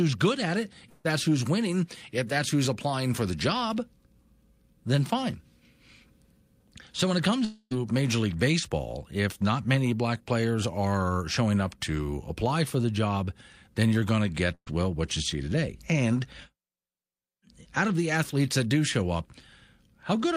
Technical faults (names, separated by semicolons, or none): long network dropout; burst of packet loss